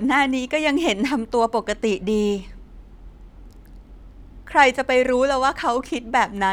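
There are no technical faults to describe in time order in this speech recording.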